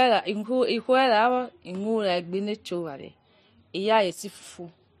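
From 4.12 to 4.17 s, the speech level falls abruptly by about 6 dB, then returns. The likely cause is one channel dropping out briefly.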